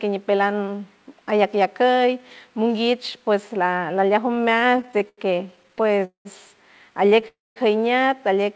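From 4.28 to 6.03 s the speech drags and catches through repeated stalls (stutter): 26 brief gaps, the longest 87 ms, where late packets emptied the jitter buffer and the last sound was stretched to fill them. About 331 ms is added and nothing is lost, so the effect is many small hitches rather than one hole.

A call audio freeze follows at 6.05 to 6.27 s and another at 7.28 to 7.58 s, likely from packets held up in transit. Each is a single pause where the last sound buzzes briefly and fades, then goes silent for 120 ms and 200 ms respectively before the speech resumes intact, 202 ms and 280 ms later than it would have. That one long stop is what sets these apart from the stutter. Over the G.722 call path, nothing is heard above 8 kHz.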